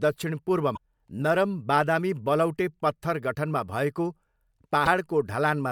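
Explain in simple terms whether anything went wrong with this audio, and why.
Damaged data in a compressed stream causes two brief glitches in this speech, from 0.73 to 0.78 s and from 4.84 to 4.88 s. Part of the compressed file was corrupted there, so the decoder lost its place and produced a short chirp or blip before recovering.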